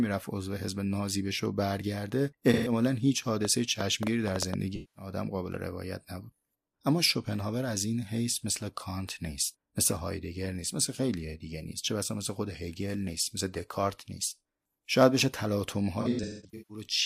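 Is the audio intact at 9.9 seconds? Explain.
Yes, at 9.9 seconds the speech is intact, with no dropout, click, distortion or other fault at that moment.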